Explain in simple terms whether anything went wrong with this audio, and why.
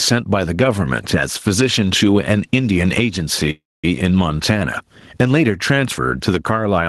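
Two things stand out. The first runs through the whole clip: gain pumping. Loud and quiet moments end up squashed close together. That's most likely the microphone gain set way too high, with a fast limiter or compressor yanking the level down on every loud sound and letting it spring back in the gaps.

The second is a call audio freeze from about 3.50 to 3.85 s. The sound gets stretched into a short buzzy tail that fades out, and the last stretch is near-silent, about 230 ms of it. Then the speech carries on exactly where it stopped. The likely cause is packets getting held up on the way, so the call's jitter buffer ran dry and had to fill the gap. Nothing was actually lost. The audio just got delayed by about a third of a second.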